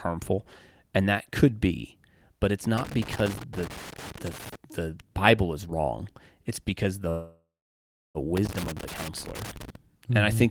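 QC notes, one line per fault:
2.78–4.55 s and 8.37–9.76 s, loose connector crackle. Irregular bursts of crackle and scratching break up the speech. A worn or dirty contact is making and breaking rapidly, chopping the signal. Any DC on the line turns each break into a pop.
7.09–8.18 s, call audio freeze. The last sound hangs on as a fading buzz or hiss, then drops to about 0.69 s of silence. Speech resumes where it stopped, with nothing missing, now about 1.05 s later. Delayed packets likely emptied the jitter buffer.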